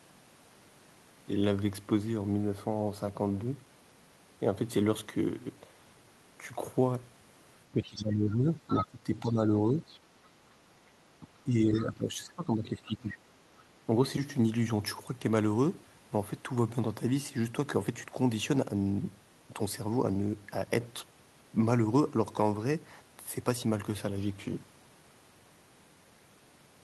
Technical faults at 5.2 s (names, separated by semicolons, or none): none